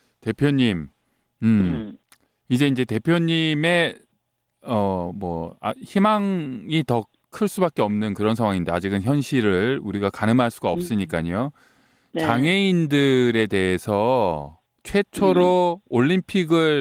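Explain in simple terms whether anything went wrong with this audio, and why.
Nothing in this speech recording stood out as a problem on listening.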